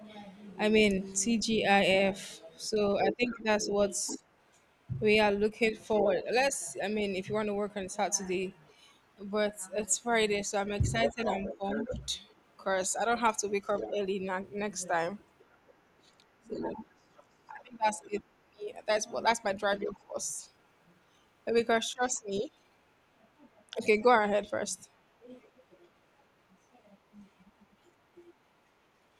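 From 0.4 s to 22.4 s there's a second voice sitting underneath the talker, about 10 dB down. That's the other side's voice leaking through. The far end is playing on a loudspeaker at the talker's device, and the echo canceller likely isn't stripping all of it out of the mic.

While that's going on, the talker gets squashed in places, which is speech suppressed in double talk. Between 2.73 s and 6.06 s the main voice dips by up to about 15 dB, adding up to roughly 0.7 s of affected sound. From 11.1 s to 25.6 s it happens again and harder, with drops of up to about 25 dB and around 3 s affected in total. With both sides talking at once, the canceller likely couldn't tell its own talker from the echo and turned everything down together, so the talker's speech sags and goes patchy in pieces.

The leak comes back very briefly at 25.41 to 25.48 s. It's only a tiny trace of the other side's voice leaking through, about 35 dB below the speech.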